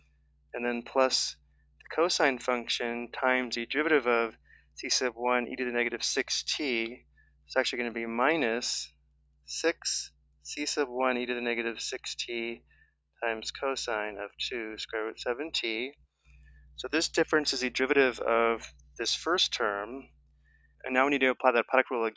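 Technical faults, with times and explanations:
Throughout: noise suppressor applied to music or sounds. A suppressor tuned for speech stays active across the clip and treats sustained, steady content as noise, so its gain keeps moving by something like 10 dB. Sharp onsets pass while held sounds and their tails are pulled down, giving a pumping, fluttering, thinned quality, all within a band that stops near 8 kHz from the call's microphone processing.
0.00–1.83 s, 4.35–4.77 s, 6.99–7.49 s, 8.89–10.45 s, 12.59–13.18 s, 18.80–18.96 s, 20.07–20.83 s: sound cut by the noise suppressor. In each span the suppressor judges the sustained or decaying sound to be noise and pushes it down harder than its surroundings, by about 13 dB at worst (about 12 dB at 12.59 s and about 7 dB at 18.80 s). Levels sag and decays end early, while sudden attacks largely survive.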